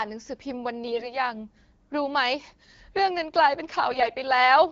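From 0.88 to 1.19 s, and again from 3.92 to 4.15 s, the speech turns hoarse and gargly: AMR bit errors, with the first burst heavier, around a tenth of bits flipped, than the second, around a twentieth. Corrupted pulse positions and wrong pitch, gain and spectral values roughen the voice while pitch and loudness hold. Unlike frame loss, there are no gaps or muted concealment. The surrounding wideband codec sounds clean, as at 12.65 kbit/s.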